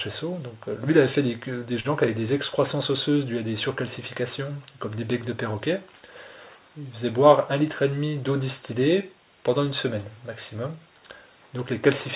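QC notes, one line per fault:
1.80–1.87 s, short stall from a late packet: a packet turned up late, the jitter buffer ran dry, and the receiver stretched the last bit of sound by 45 ms until it arrived, then carried on from the same spot. Nothing's lost, but that sound hangs a beat too long with a slight buzz or dip, and everything after lands 45 ms later. It sits on a narrowband call path with nothing above 4 kHz, which fits G.711.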